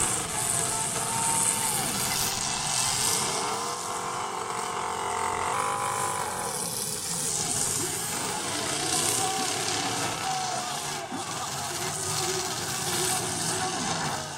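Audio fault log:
5.53–7.29 s, section at the wrong speed. For this stretch the audio runs 1.12 times faster than the material around it. Pitch climbs along with the tempo, by about two semitones, so the sound turns higher and more hurried at the same moment. Both shifts begin at 5.53 s and stop at 7.29 s. The likely cause is this portion being played or resampled against the wrong clock, so its rate no longer matches the recording.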